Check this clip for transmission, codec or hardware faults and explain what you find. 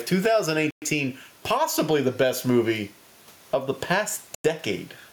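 Two faults are audible: gain pumping across the whole recording and two short Bluetooth stalls.

Gain pumping runs throughout. The room noise sits about 39 dB under the speech, and the gain swings by roughly 10 dB, squashing loud and soft parts closer together. This likely comes from gain set far too high, with a fast limiter clamping it on each peak. It differs from a noise gate because the background never drops out completely.

The Bluetooth stalls occur at 0.71 to 0.82 s (113 ms) and 4.35 to 4.45 s (97 ms). Each time, the sound cuts to pure silence and then carries on. Interference likely held up packets until the headphone buffer ran empty. Codec packet-loss concealment would fill the gap with smeared or buzzy sound, but these gaps are dead silent.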